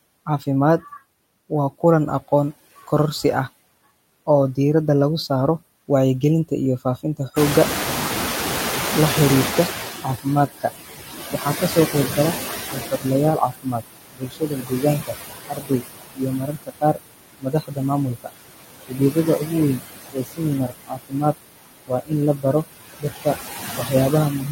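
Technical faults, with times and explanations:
Throughout: noise suppressor artifacts. The suppressor pulls down each band it judges to be steady noise, by about 18 dB, and updates its decision frame by frame. The residual background dips in pauses and swells back under speech. A spectrogram shows the noise floor as a patchy, speckled layer that darkens between phrases and fills in beneath them.
7.36 to 10.17 s: noise suppressor catching up. Around 7.5 s the room noise jumps by about 20 dB, ending up only about 7 dB below the speech. The suppressor's noise estimate trails that jump, so the louder background passes through with less reduction at first. It then sinks over roughly 2.8 s as the estimate adapts, reaching a cut of about 15 dB. On a spectrogram the broadband floor brightens abruptly, then fades gradually, like a wedge tapering across those seconds.
10.02 to 10.65 s, 11.33 to 18.3 s, and 18.88 s to the end: speech cut by the noise suppressor. 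With the background now close to speech level, the suppressor mistakes parts of the speech for noise and turns them down along with it. The first stretch loses about a fifth of a second, with drops of up to about 17 dB. The second loses around three seconds in total, with drops of up to about 21 dB, and the last reaches about 22 dB. The affected speech comes out swallowed or faint. A spectrogram shows ragged holes in the speech energy where it was turned down.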